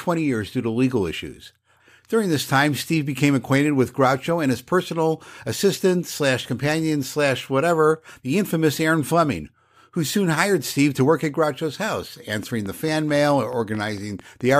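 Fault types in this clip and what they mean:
Train of clicks: a run of short, near-identical pulses riding on the speech, heard as a steady ticking from 12.43 to 14.42 s, close to the end of the clip. The clicks arrive at a regular 4.55 per second, about ten in all, and each peaks at roughly the same level as the speech itself. The even spacing and uniform shape point to a likely cause in electrical interference or a faulty connection or power supply.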